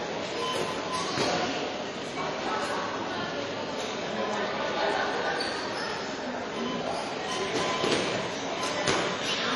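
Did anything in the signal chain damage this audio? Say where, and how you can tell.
Yes. The damage sits at the codec stage and runs through the whole clip. This is transcoding between lossy codecs. Nothing is present above 12 kHz at any point. That cut-off is the lowest in the chain and survived every pass. Several kinds of codec artefact are layered together. MP3 artefacts sit under the sound, with AAC artefacts on top. This is likely an MP3 passed through AAC-LC and then HE-AAC, each at a low bitrate. Every re-encode spent bits on the previous artefacts and added its own.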